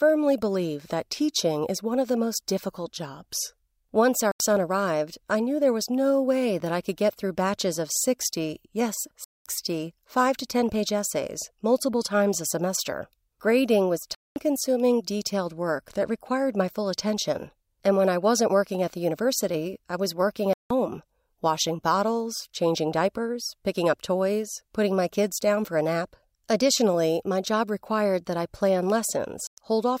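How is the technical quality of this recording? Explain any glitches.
The speech is marred by five short holes where the sound cuts out completely. Each is most likely a Bluetooth dropout: audio packets failed to reach the headphones in time, so playback went silent until good packets arrived. The gaps fall at 4.31–4.40 s (85 ms), 9.24–9.46 s (213 ms), 14.15–14.36 s (213 ms), 20.53–20.71 s (171 ms) and 29.47–29.58 s (107 ms). All of these are multiples of roughly 21 ms, which points to whole packets being lost. Each hole has sharp edges or a fade of a few milliseconds, and the speech picks up further along, as though it had kept playing. That skip forward is what sets it apart from a buffer underrun, which stalls and then resumes where it left off.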